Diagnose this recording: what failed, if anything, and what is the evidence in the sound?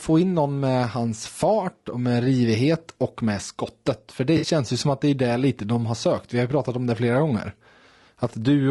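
The codec stage is the first problem. Across the whole recording the speech has a rough, grainy texture, with noise filling the gaps between harmonics and a top band that sounds thin and synthetic. That's most likely low-delay AAC compression, something like AAC-ELD, running at a modest rate; the damage fits about 32 kbps. Its short frames can't resolve pitch harmonics cleanly, and with so few bits the encoder approximates the highs instead of coding them properly.

The second fault is in delivery. Around 4.37 to 4.47 s there's a smeared, noisy patch where the sound goes phasey and loses definition for about a tenth of a second. That's AAC frame loss with concealment. Frames never reached the decoder, so it rebuilt the gap from the last good spectrum, which sounds right but fake. The length points to three lost frames, roughly 60 ms of missing audio, short enough that it never decays to silence.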